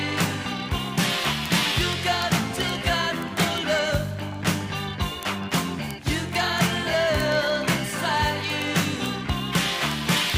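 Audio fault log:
0.13–10.36 s, word clock ticks: sharp clicks repeat roughly every 30 ms, around 400 in all. The receiving clock is not locked to the sender's and drifts by something like 700 ppm, dropping or repeating one sample at each slip. On a spectrogram they appear as evenly spaced thin vertical broadband lines. On the waveform they are small single-sample steps.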